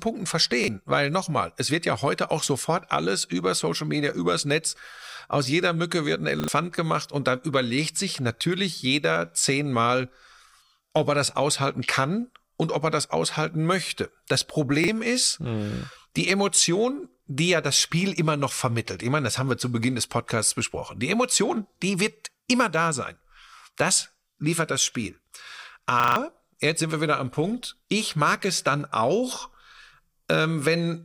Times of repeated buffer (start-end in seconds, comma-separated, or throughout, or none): 0.64-0.68, 6.40-6.48, 14.84-14.88, 26.00-26.16